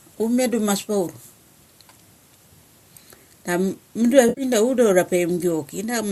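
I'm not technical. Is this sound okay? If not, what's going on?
No, there's one short glitch. At 4.29 to 4.43 s the speech briefly turns smeared and noisy, like a smudge. That's AAC frame loss with concealment: a few small chunks of compressed audio went missing, mostly in one gap of roughly 70 ms, and the decoder papered over the hole by reusing the last good sound with some scrambling so it wouldn't just cut out. The audio was likely squeezed with low-delay AAC compression, the kind used in video calls.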